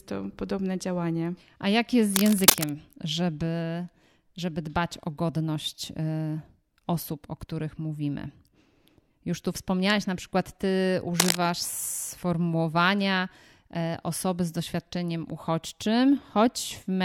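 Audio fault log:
2.14–2.72 s and 11.20–11.37 s, cable scratch noise: dense, uneven scratching bursts sit a few dB above the speech, after "jak jest z" and after "wspomniałaś na przykład ty". A worn cable or connector being moved is the likely cause, since its contact resistance jumps rapidly.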